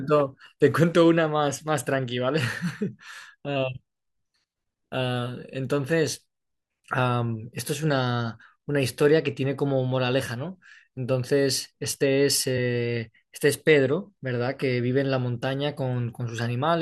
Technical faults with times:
12.56 damaged data in a compressed stream

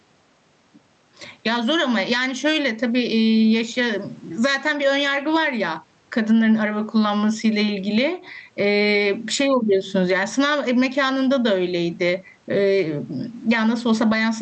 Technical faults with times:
0.00-14.41 gain pumping

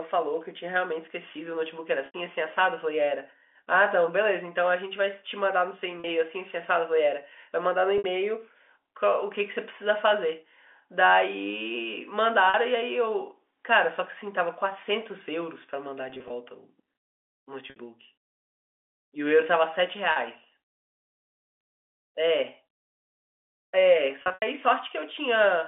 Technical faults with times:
2.06-2.14 packet loss with pitch repetition
6.00-6.04 packet loss with pitch repetition
7.98-8.04 packet loss with pitch repetition
12.50-12.54 packet loss with pitch repetition
16.10-16.30 packet loss with pitch repetition
17.70-17.76 packet loss with pitch repetition
20.12-20.16 packet loss with pitch repetition
24.22-24.42 packet loss with pitch repetition

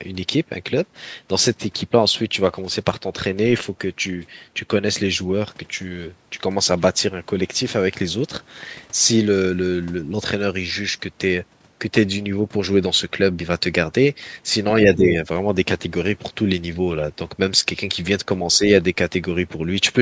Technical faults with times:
14.95-15.17 speech suppressed in double talk
18.58-18.62 speech suppressed in double talk

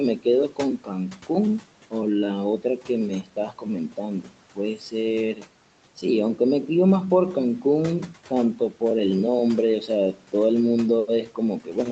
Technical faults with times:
0.19-1.93 speech cut by the noise suppressor
2.60-2.89 speech cut by the noise suppressor
3.23-4.93 speech cut by the noise suppressor
5.35-5.45 speech cut by the noise suppressor
8.30-8.82 speech cut by the noise suppressor
9.87-10.33 speech cut by the noise suppressor
11.07-11.91 speech cut by the noise suppressor

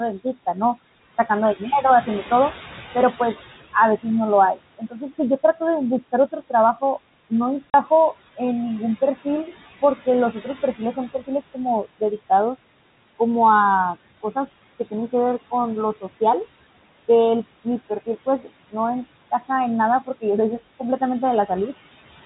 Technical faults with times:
0.00-22.25 noise suppressor artifacts
3.73-8.40 speech cut by the noise suppressor
7.70-7.74 packet loss filled with silence
9.01-12.31 speech cut by the noise suppressor
17.64-18.75 speech cut by the noise suppressor
19.31-20.23 speech cut by the noise suppressor
20.79-21.50 speech cut by the noise suppressor

